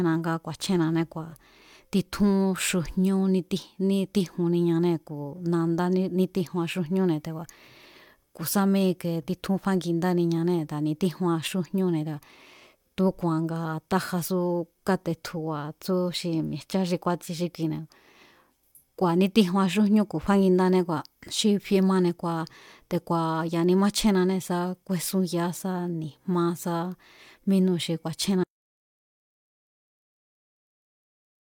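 At 28.44 s, just after "mínúu̱ xi", the speech cuts off abruptly into total silence, with no room tone, and stays silent to the end at 31.51 s. This audio dropout to silence likely comes from the input being lost while zeros kept being written.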